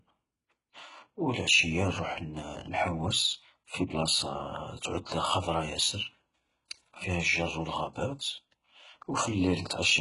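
HE-AAC compression damage runs throughout this speech clip: the treble sounds synthetic, sibilants turn gritty and lispy, and nothing sits above about 11.1 kHz. The likely cause is heavy coding that fits a bitrate near 12 kbps, with the highs rebuilt by copying lower bands upward.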